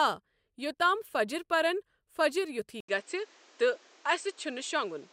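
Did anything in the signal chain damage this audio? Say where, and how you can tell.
Yes, at the input stage. At 2.80 s an 80 ms gap appears, then the spectrogram goes empty above 8.4 kHz over a faint new noise floor. That is likely an input switched to a poorer device.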